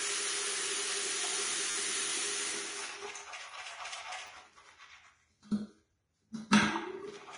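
Throughout, the everyday sounds are dull and smeared, with nothing above 10.6 kHz and layered swirly artefacts, likely from transcoding between lossy codecs, HE-AAC then Vorbis at low bitrates. At 1.71–1.75 s and again at 4.27–4.29 s, a brief buzzy stutter is heard: a repeated buffer, where one short slice, fitting a 10 ms buffer, replays with hard joins.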